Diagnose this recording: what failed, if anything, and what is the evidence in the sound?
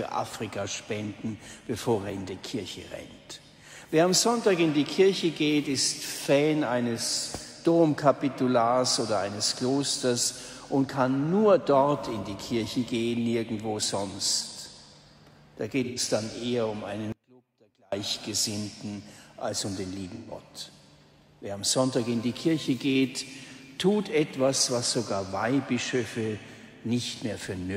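AAC frame loss with concealment, at the codec and network stage. Short smeared, noisy patches sit at 15.84 to 16.00 s and 20.15 to 20.31 s, each about 0.13 s long. That fits three lost frames each time. A briefer one lands at 27.14 s, about 0.04 s, which points to a single frame. The decoder had no data for those frames. It rebuilt them from the last good spectrum, so the patches sound blurred rather than silent.

Audio dropout to a faint residue, from 17.12 to 17.92 s. The sound cuts out abruptly for about 0.8 s and returns just as suddenly. The gap is not silent. A faint trace of the sound remains, roughly 35 dB below its normal level. The hard edges rule out a fade or a natural pause. The likely cause is a break in the feed ahead of a path that stayed live, letting only a weak leak through.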